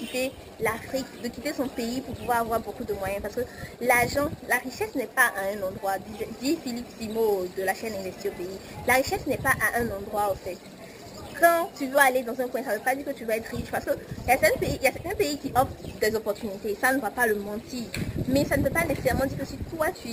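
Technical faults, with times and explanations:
Throughout, imaging from sample-and-hold upsampling: each sample was simply repeated to raise the rate, with no smoothing filter, which fits a 12 kHz original. Mirrored spectrum copies fill 6 to 12 kHz and above, about 16 dB down, heard as a metallic fizz that tracks the level.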